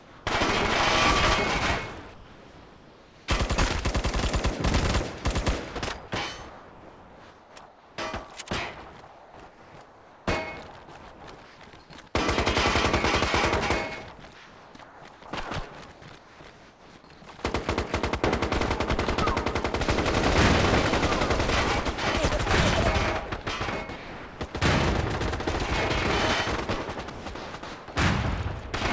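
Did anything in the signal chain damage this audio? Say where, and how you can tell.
Yes. Comfort noise in place of the background appears in the call-processing stage at 0.0 to 0.26 s, 2.14 to 3.28 s, 6.50 to 7.98 s, 9.08 to 10.26 s, 11.12 to 11.58 s and 14.34 to 17.22 s. In these gaps the real background, sitting about 25 dB below the loud passages, becomes a flat, textureless hiss, in places about 2 dB quieter. On a spectrogram the detail in those gaps smooths into an even, featureless wash. The likely cause is discontinuous transmission, with the receiver synthesising noise while the sender is silent.

The sound is also chopped by the voice detector at 23.42 to 24.54 s and 27.10 to 27.88 s, where roughly half a second in each span is swapped for synthetic fill. The sender's detector likely toggled on and off within each stretch, so quiet edges of the sound vanish. On the waveform the quiet parts show abrupt steps in level and texture. 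Across the whole clip, the spectrogram shows nothing above 8 kHz, consistent with the wideband call codec on this path.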